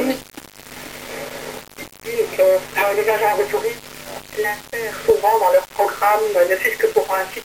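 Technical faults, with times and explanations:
Throughout, low bit depth without dither: the audio has a coarse, grainy distortion that shifts with the sound itself, turning quiet passages gritty and letting the faintest parts sputter or drop out. This is likely from the signal being rounded to about 5 bits with no dither, so each sample snaps to one of very few levels and the error tracks the waveform, leaving that distortion only around 15 dB below the sound.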